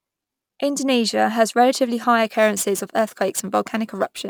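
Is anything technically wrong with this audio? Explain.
Yes. From 2.25 s to the end, the speech carries crude rate conversion: samples were simply dropped, consistent with a 48 kHz to 44.1 kHz change without filtering. A gritty, inharmonic fizz, only about 20 dB down, trails louder and brighter syllables; a spectrogram shows stray aliased partials mirroring the harmonics.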